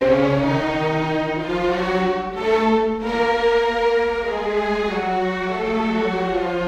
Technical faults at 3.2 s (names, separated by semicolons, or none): none